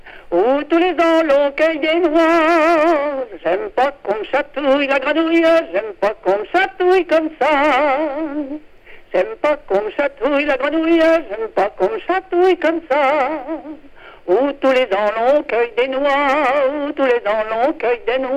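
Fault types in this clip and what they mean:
Hard clipping: peaks overrun the stage by about 4 dB and get sliced flat, so a small share of samples crackle with added high harmonics throughout.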